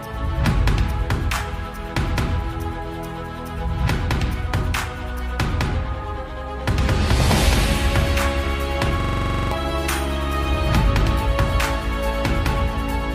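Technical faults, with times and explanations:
9.00–9.52 s, system hang loop: a single 43 ms slice of audio repeats exactly 12 times, giving a rough, machine-gun stutter at 23.4 Hz, which fits a 2048-sample ring buffer replaying while the system froze. About half a second of the real audio is lost. It differs from a dropout or packet-loss glitch because the same fragment returns identically at a rigid rate rather than falling silent or smearing.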